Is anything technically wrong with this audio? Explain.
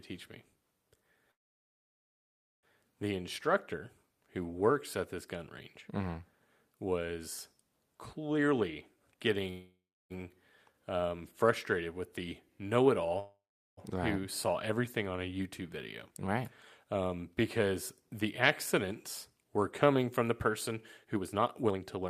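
Yes. There are three call audio freezes and two stretches of jitter buffer speed-up in this speech.

Call audio freeze, at 1.31 to 2.65 s, 9.51 to 10.12 s, and 13.19 to 13.79 s, just before "right who saw everything": the jitter buffer likely ran empty while packets were held up in transit. The last sound trails off as a brief fading buzz and then silence, lasting about 1.3 s in the first freeze and about 0.3 to 0.4 s in the later two. The speech then resumes where it stopped, delayed but with nothing lost.

Jitter buffer speed-up, at 8.34 to 9.48 s and from 16.83 s to the end: the buffer had built up too much delay, so the receiver repeatedly cut out pitch-period-sized slices. The speech runs about 28% fast in the first stretch and about 15% fast in the second, at unchanged pitch. It sounds hurried, with roughly 0.3 s and 0.7 s removed.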